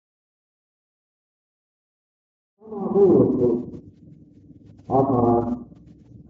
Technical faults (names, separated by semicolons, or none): none